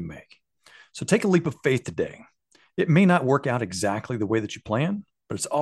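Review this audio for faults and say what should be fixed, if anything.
No faults; nothing needs fixing.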